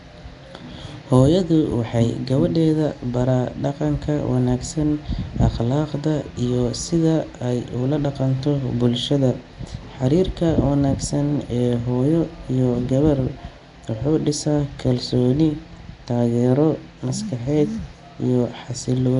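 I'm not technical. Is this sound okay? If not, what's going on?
No. Nellymoser compression runs through the whole clip. The speech sounds rough, hissy and underwater, likely from Flash's old microphone codec patching missing detail with noise.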